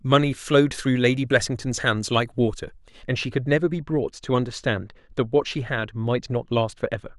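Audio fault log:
3.06–7.19 s, de-emphasis applied wrongly: from 3.06 s to the end the speech turns abruptly dull and muffled, losing its crispness and sibilance. A treble-cut filter meant to reverse pre-emphasis acted on audio that needed none or had already been de-emphasized, sloping the response smoothly down to about 13 dB lower at 10 kHz than at 1 kHz.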